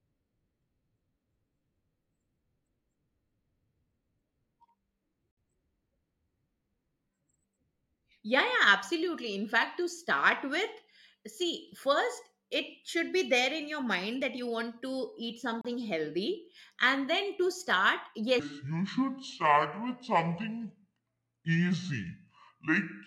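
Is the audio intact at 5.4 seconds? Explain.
No, there's a short dropout right there: from 5.31 to 5.37 s the speech cuts to silence for about 63 ms, then resumes. That's likely a Bluetooth stall, where held-up packets let the headphones' buffer run dry until resent audio arrived.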